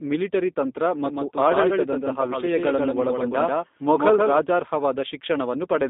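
The speech has passed through a G.729 low-bitrate VoIP coder, the 8 kbit/s kind that rebuilds each 10 ms frame from a vocal tract filter, a pitch predictor and a few pulses rather than carrying the waveform itself. The damage is plainly audible: the voice has a rough, synthetic grain, the line band runs from only about 200 Hz to 3.7 kHz, and nothing above 3.8 kHz survives, so sibilants lose their edge. A second fault, a doubled audio track, is likely caused by the same signal being captured again along a slower path and mixed back in. It begins abruptly at 1.05 s, just after "ಮಿಲಿಟರಿ ತಂತ್ರ", and ends equally suddenly at 4.39 s. Throughout that stretch a full-band copy trails the original by roughly 150 ms at about 5 dB lower level, with no decay or room colour, so every syllable is followed by a clean, flat repeat.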